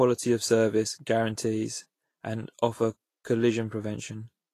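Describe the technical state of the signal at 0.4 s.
At 0.4 s the speech sounds hissy and grainy, with a rough, smeared texture in the upper frequencies and softened consonant attacks; nothing is heard above about 14.2 kHz. The same damage runs through the whole clip. The likely cause is Vorbis compression at a low setting, consistent with a rate around 33 kbps: the encoder quantises the treble residue so coarsely that fine detail is replaced by noise of similar energy, producing the graininess.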